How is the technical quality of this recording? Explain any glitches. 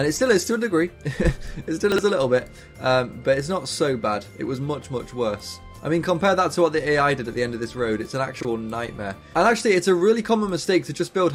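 Two brief glitches, both chunks out of order, at 1.92 to 1.98 s and at 8.41 to 8.45 s. In each, a block of about 21 ms arrives late and plays after the blocks that should follow it: two blocks late the first time, one the second. Nothing is lost, but the order is wrong, and the three hard joins produce a quick jumbled stutter. A waveform shows abrupt steps at each join, and a spectrogram shows thin vertical broadband streaks there.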